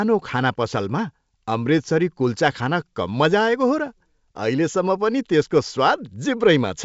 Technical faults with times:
none

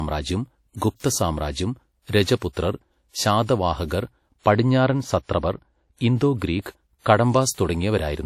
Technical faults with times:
0.00-8.26 low-bitrate audio saved at a high bitrate
4.53-6.60 de-emphasis applied wrongly

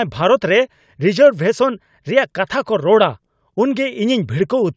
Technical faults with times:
none

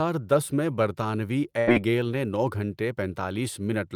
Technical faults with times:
1.59-1.69 burst of packet loss

